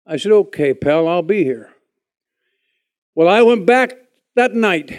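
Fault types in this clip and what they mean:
Nothing stands out here at all, just a short bit of speech with no faults to point to.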